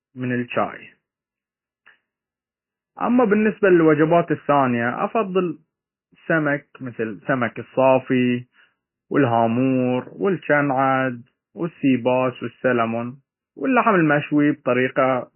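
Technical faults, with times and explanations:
Throughout, MP3 compression: heavy watery, swirling artefacts and nothing above 3 kHz, likely from MP3 encoding at a very low bitrate near 16 kbps dropping weak frequency lines.
0 to 4.54 s, filter restarted on every block: a 188 Hz buzz, ending just before "افضل السمك", as each block, fitting 256 samples, starts from silence with a small transient.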